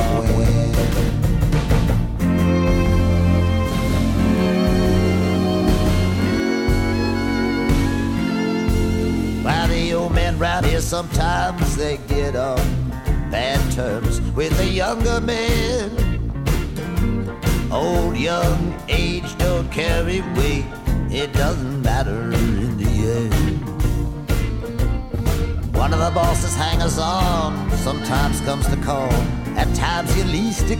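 From the very start until 6.4 s, every sound is heard twice: a second, full-band copy follows around 200 ms behind, at about the same level as the first, with no decay or room colour, so it reads as a hard slap rather than an echo. At 6.4 s the copy cuts off abruptly. This is a doubled audio track, likely caused by the audio being picked up a second time through a slower path or by an edit leaving two copies out of step.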